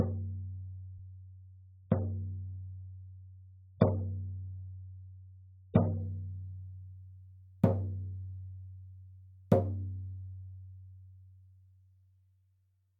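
Right from the start and through to about 6.0 s, you're hearing an adaptive stream starting at a low bitrate. The player grabbed a cheap version so playback could begin quickly. The top end is simply gone, with nothing above 5 kHz, and the codec smearing is stronger, which fits something like 8 kbit/s AAC. Once the player had measured the connection, it jumped to a much better stream, sounding closer to 96 kbit/s. That switch comes suddenly at 6.0 s, with no gap.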